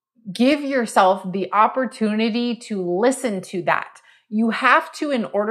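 Dropped samples at 0.52 s, just before "yourself the opportunity": a few samples, about 0.1 ms, likely went missing, so the waveform jumps, giving one sharp click.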